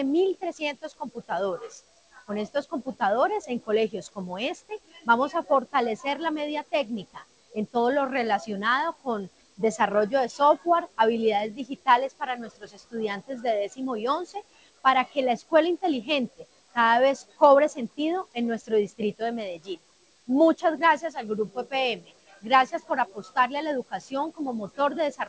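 There are no technical faults to describe at any point; the audio simply passes through a G.722 call path, which leaves nothing above 8 kHz.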